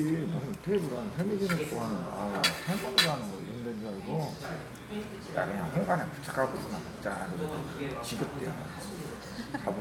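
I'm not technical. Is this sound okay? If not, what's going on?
Yes, it's okay; I can't hear any problems.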